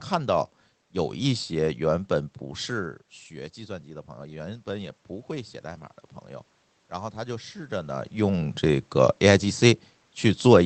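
From 2.72 to 5.92 s the automatic gain rising is audible. Just before it, around two and a half seconds in, the talker moves away and the level at the microphone drops by about 14 dB. The gain control reacts by raising its gain slowly, by about 5 dB over those three seconds. Unlike a talker simply moving closer again, the room noise swells along with the speech, so the whole background creeps up together.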